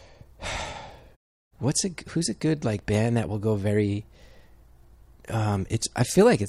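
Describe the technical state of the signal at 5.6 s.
At 5.6 s the speech signal is intact, with no fault present at that moment.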